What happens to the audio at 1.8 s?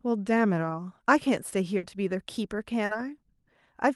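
A burst of packet loss hits from 1.77 to 1.85 s: the receiver stretches the last sound for about 60 ms, fading it, then resumes with 60 ms missing.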